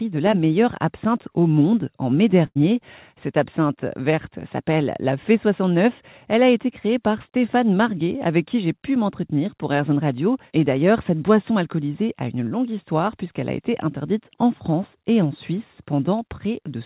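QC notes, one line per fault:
2.46–2.57 s, burst of packet loss: Right after "au monde en mai", a run of lost packets leaves a hole of about 100 ms. The receiver covers roughly 93 ms of it by extending the last sound while turning it down, so it comes across as a brief held sound that fades before speech resumes further along. On a spectrogram the last sound runs on flat and dim, then cuts abruptly to the later speech. The waveform shows a decaying stretch and then a jump.
12.49–12.53 s, short concealed packet loss: Between "boisson alcoolisée a une" and "histoire puisqu'elle a été", about 20 ms of audio arrived too late. The decoder patched roughly 13 ms by continuing the preceding sound and blending back into the real signal, which leaves a brief smear or wobble at the word join. On a spectrogram there is a thin blurred vertical seam. In the waveform the preceding sound briefly continues before blending into the real signal. 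As with the rest of the call path, nothing shows above 4 kHz, which fits narrowband G.711 mu-law coding.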